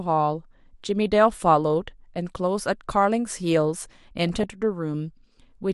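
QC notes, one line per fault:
Throughout, MP2 compression: the speech sounds dull and gurgling, with granular distortion, likely from MPEG Layer II coding at a rate that fits about 80 kbps. Starved upper sub-bands switch off, so a spectrogram shows a flickering, blocky high-frequency ceiling.
4.17–4.44 s, DAB burbling: a short burbling patch where bit errors slipped past error correction into the audio frames. Corrupted samples put short blips of noise into single sub-bands, which shows as isolated bright blocks on a spectrogram.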